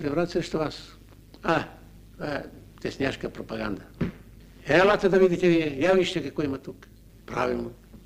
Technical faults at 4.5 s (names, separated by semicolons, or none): overlap-add ripple